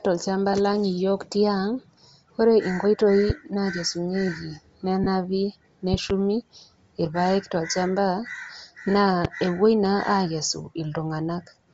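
Bluetooth LC3 compression, throughout: the speech has a breathy, grainy edge, with the upper spectrum thinned and noise-filled, which fits the likely cause of LC3 coding at 32 kbps with 7.5 ms frames.

Lost LE Audio frames, at 0.53 s and 5.04–5.07 s: the decoder reuses the last spectrum with scrambled signs, covering one 7.5 ms frame and then three frames (22.5 ms). Each gap is heard as a brief noisy smear in the speech.

Loud pop, at 3.30–3.32 s, 5.94–6.12 s and 9.25–9.27 s: sharp pops sit on top of the continuing speech, about 10 dB above it at first, then about 15 dB. The middle event is a double pop. A voltage step or pulse entering the signal chain is the likely cause.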